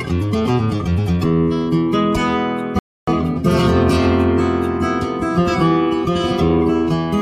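A rebuffering stall silences playback at 2.79 s for 285 ms while the player waits for data, resuming exactly where it stopped, unlike a dropout.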